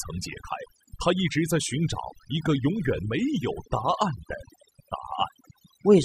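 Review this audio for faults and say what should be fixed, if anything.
Throughout the speech, the near-silent gaps are sprinkled with twinkling specks. This is overdone noise removal: bands near the noise estimate, and quiet speech detail, were pulled down. Set the noise reduction gentler, and check that quiet speech survives before committing.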